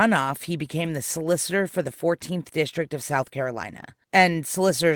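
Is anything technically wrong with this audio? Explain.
Yes, there is one fault in this speech clip. From 0.84 to 0.86 s, a lost packet was rebuilt from error correction: a low-bitrate copy sent in the following packet fills in for it, which fits a single 20 ms packet. The speech therefore runs on without a gap, but that stretch sounds briefly rougher and noisier. The waveform stays continuous, while a spectrogram shows a thin smeared, noisy band.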